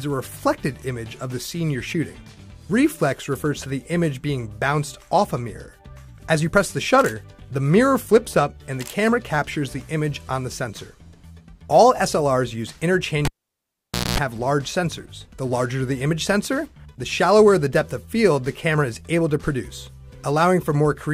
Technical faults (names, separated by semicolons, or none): cable pulled and plugged in